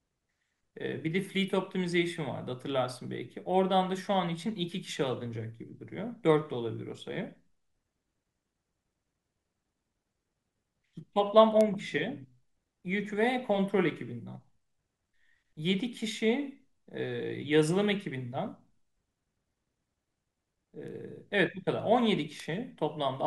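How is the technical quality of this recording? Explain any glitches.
The speech has three bit error spikes, at 11.61 s, 20.88 s and 22.40 s. Each time a flipped bit shifted one or two samples by a power of two and straight back, giving a sharp broadband tick peaking at about -15 dBFS, with the 20.88 s one quieter at about -33 dBFS.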